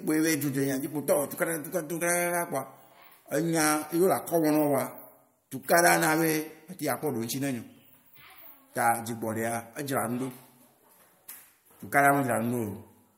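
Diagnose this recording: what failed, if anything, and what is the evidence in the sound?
Nothing in the recording points to a failure at any stage between capture and playback. No event in the sound calls for a diagnosis.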